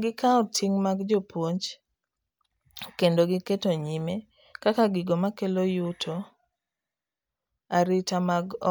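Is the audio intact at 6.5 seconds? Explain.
Yes, the speech at 6.5 seconds is intact, with no audible dropout, glitch or other technical fault at that moment.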